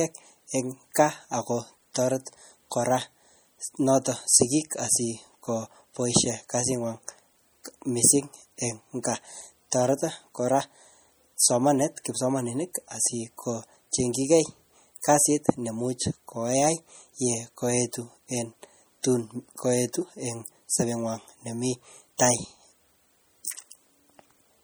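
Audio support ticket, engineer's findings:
MP3 compression, throughout: watery, swirly texture in the speech. Spectrogram shows flickering holes where weak bins drop out, content ending near 21.1 kHz. Likely a low-bitrate MP3, around 48 kbps.

Pre-echo at 22.18 s, right after "sobenywan nemii": brief hiss ahead of a sharp attack. Waveform shows a 15 ms noise smear before the onset, from block-spread transform-codec quantisation noise.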